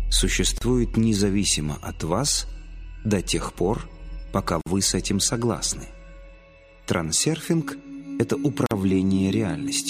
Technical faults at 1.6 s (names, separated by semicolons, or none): none